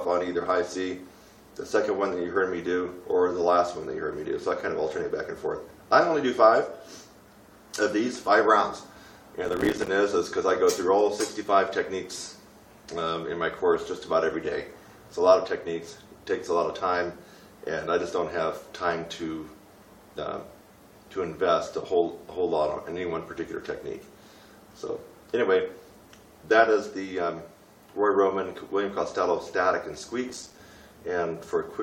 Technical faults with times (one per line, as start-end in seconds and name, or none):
9.45-9.88 processor overload crackle
30.29-30.59 processor overload crackle